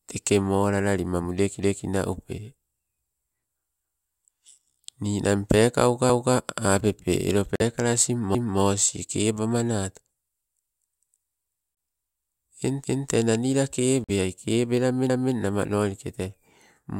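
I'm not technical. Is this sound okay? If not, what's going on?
No. At 6.10, 8.35, 12.85 and 15.10 s, a quarter-second of speech plays twice, like a stutter. That's overlapping chunks, just before "apepe elo" the first time.

The speech briefly cuts to silence at 7.56–7.62 s, after "pekauka apepe elo", then at 11.75–11.77 and 14.04–14.10 s. A Bluetooth dropout is the likely cause.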